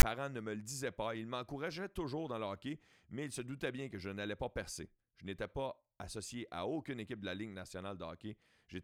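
From 0 to 0.03 s, right before "ne me le disaient", file tags are played as audio. Text tag bytes were read as samples. They give a loud, lopsided rasp with hard edges. Zero padding in the tag block follows as brief silence.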